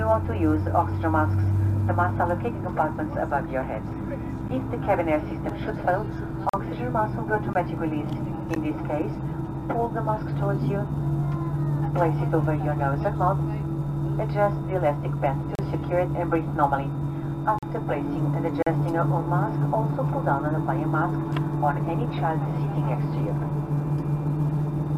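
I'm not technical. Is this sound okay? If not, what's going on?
No. There are brief silent holes, a gap between stream segments, at 4.48, 5.49, 6.49–6.54, 7.53, 8.55, 15.55–15.59, 17.59–17.63 and 18.63–18.67 s, spaced on one-second steps. Unlike a dropout, nothing is missing: the sound pauses and resumes exactly where it stopped.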